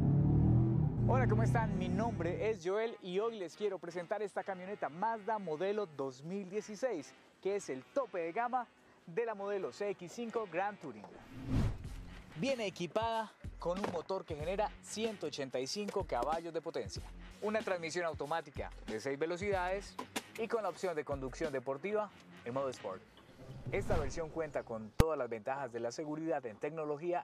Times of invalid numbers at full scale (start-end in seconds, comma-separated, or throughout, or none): 25.00